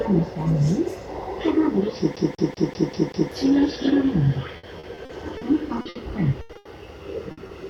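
From 2.16 to 3.32 s the CD is stuck on one turn: a 193 ms slice replays six times, each jump marked by a brief mute, forming identical repeating blocks in the waveform.

Between 4.57 and 5.43 s, repeated packet loss produces a choppy, robotic texture. Five gaps, the longest 60 ms, are patched by stretching the previous sound, leaving smeared, flat-topped patches in the spectrogram.

At 5.81 to 5.87 s a short concealed packet loss causes a 40 ms smear, followed at 5.89 to 5.97 s by a 60 ms burst of packet loss that fades out, a dimming band before the sound jumps ahead.

Bursts of packet loss at 6.41 to 6.51 s and 6.57 to 6.67 s each drop 80 ms. Between them, at 6.53 to 6.57 s, a short concealed loss fills 20 ms. Each burst shows as a decaying smear.

A final burst at 7.31 to 7.39 s removes 60 ms, and a short concealed packet loss at 7.47 to 7.51 s leaves a 20 ms smear.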